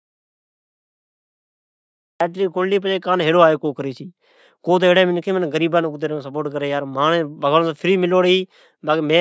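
Until 2.21 s, the clip sits in an audio dropout to silence. There is no room tone at all. The input was likely lost while recording continued.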